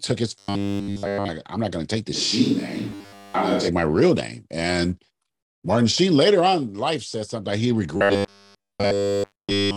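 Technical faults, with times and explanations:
0.38–1.28 s, 2.90–3.34 s and 7.97 s to the end: robotic sound from repeated short buffers. New audio likely stopped arriving in time, so playback looped its last fragment across each span, which fits a 10 ms segment. That loop stamps a rigid, metallic 100 Hz buzz on the speech, which only loosely keeps its shape.
2.16–3.67 s: switch to a distant microphone. The close microphone's feed likely dropped out, leaving a farther one. The speech turns abruptly roomy and hollow, with thinner bass and little change in level. Room noise sits about 25 dB below the speech, and the buzz above overlaps this span.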